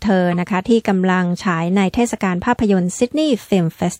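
At 0.31 s, a corrupt frame decoded produces a brief chirp, squeak, blip or burst of noise lasting about 50 ms. Flipped bits misplaced energy across one frame, peaking around -15 dBFS.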